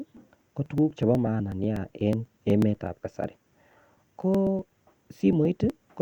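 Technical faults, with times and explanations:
0.17 to 5.94 s, periodic USB or driver dropouts: a steady tick runs through the speech every 0.12 s, around fifty in all. Each time, something on the bus or in the driver stalls the stream and a couple of milliseconds of audio are skipped, so the waveform jumps instead of falling silent. The strict clock-like spacing, and ticks that sound only where there is signal, set this apart from random packet loss or isolated clicks.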